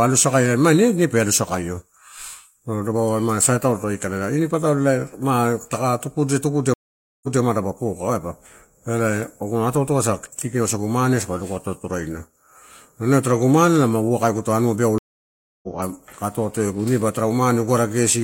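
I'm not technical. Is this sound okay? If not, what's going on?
No. The speech has two stream reconnects. At 6.74 s the connection drops, the sound goes silent for about half a second, and when it returns at 7.41 s it jumps back, replaying roughly the last fifth of a second. At 14.98 s it cuts out for about 0.64 s and picks up at 15.68 s around 0.4 seconds further on, so a little is skipped. Unlike a simple dropout, the speech doesn't resume where it stopped.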